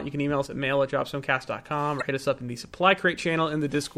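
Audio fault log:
0.46–0.51 s, one channel drops out: speech falls abruptly by about 6 dB, likely from one stereo side vanishing before the mono sum. The waveform steps down, then back up.
1.98–2.02 s, damaged data in a compressed stream: corrupted frames make the decoder lose sync and hunt for the next header, giving a short blip.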